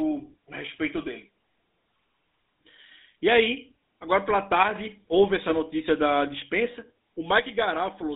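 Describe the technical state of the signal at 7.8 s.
At 7.8 s the whole thing is still running through the GSM full-rate codec: the band sits at roughly 200 Hz to 3.7 kHz, and the pulse-driven vocal-tract model gives the speech that plainly audible buzzy, gravelly edge, which fits the old 13 kbps full-rate coder.

On top of that, from 7.39 s to the end at 8.15 s the level drops abruptly by about 6 dB. That's most likely one channel dropping out before the mono sum.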